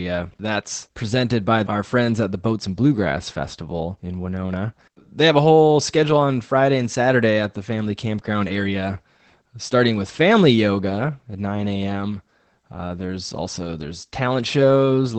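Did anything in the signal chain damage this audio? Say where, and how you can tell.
Yes. Opus voice compression runs throughout the speech, damaging it at the codec stage. Nothing sounds above about 8.6 kHz, the wideband limit, and the plainly audible muffled, hoarse, slightly robotic texture points to coarse linear-prediction excitation coding at a low bitrate around 12 kbps.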